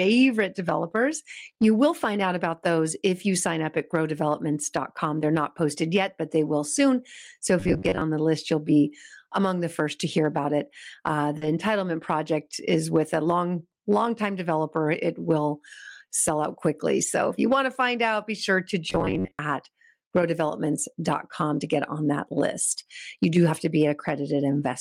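The clip is speech with four kinds of network and playback fault. From 1.45 to 1.63 s there is repeated packet loss (robotic sound): three holes of up to 20 ms each, about 60 ms in all and a third of that stretch, are patched by stretching the preceding audio. The result is choppy and uneven rather than a steady tone. At 7.60 to 8.02 s and again at 18.90 to 19.39 s the audio becomes robotic sound from repeated short buffers, a rigid buzz locked at 93.8 Hz. That fixed pitch, unlike the irregular chop of packet loss, points to a playback buffer of about 10.7 ms likely being replayed while roughly half of the real audio is skipped. At 11.37 to 11.43 s a short concealed packet loss fills 40 ms by extrapolating the last sound, heard as a brief smear or wobble. Overlapping it, from 11.41 to 11.47 s, two packets (40 ms) are a lost packet rebuilt from error correction, and a single 20 ms packet is rebuilt the same way at 16.49 to 16.51 s. 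These rebuilt frames leave no gap or smear. They come through rougher and noisier instead, because they are decoded from a low-bitrate backup copy of each lost packet.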